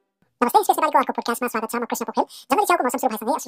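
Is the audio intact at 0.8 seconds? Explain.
No. From 0.38 s to the end, audio read two samples at a time plays at 2x speed, an octave higher. Spectrograms show upward-shifted, time-compressed energy.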